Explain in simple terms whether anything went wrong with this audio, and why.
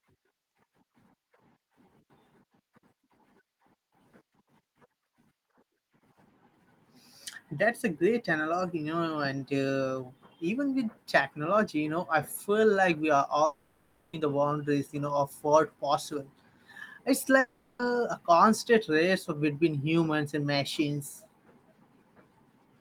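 Two gaps interrupt the speech, at 13.45 to 14.15 s and again at 17.39 to 17.81 s, lasting about 0.7 s and 0.4 s. In each, the speech breaks off into a fading buzz-like hiss, then resumes with that stretch missing. This is most likely a long network dropout. The audio stopped arriving, so the receiver kept stretching out the last sound it had to cover the hole, and the lost speech was never played.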